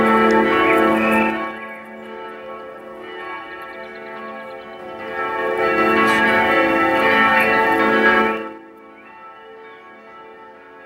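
Zipper noise shows up three times, each one a level move done in hard 3 dB jumps with no smoothing. From 1.20 to 1.62 s the sound drops about 20 dB at around fifteen steps a second. From 4.69 to 5.89 s it climbs back about 20 dB, only around five steps a second, so the ticks come more slowly. From 8.19 to 8.62 s there's a faster pull-down of about 25 dB at around twenty steps a second, and it comes across as a rough zipping ride.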